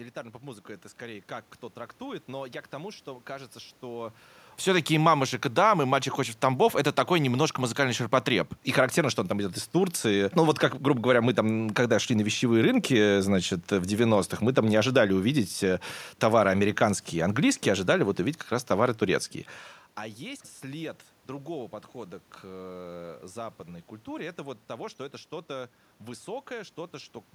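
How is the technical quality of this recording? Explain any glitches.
No glitches or system faults can be heard anywhere in the recording.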